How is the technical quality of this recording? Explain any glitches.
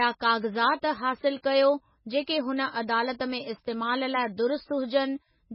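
The speech is heavily degraded. MP3 compression throughout: nothing above 5.5 kHz, with watery, swirling artefacts and smeared attacks, likely from encoding at a very low bitrate, around 16 kbps.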